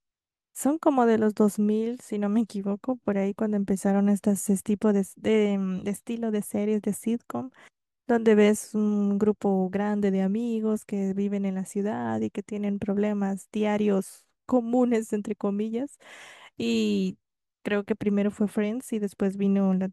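No technical faults can be heard in the speech at any point in the recording.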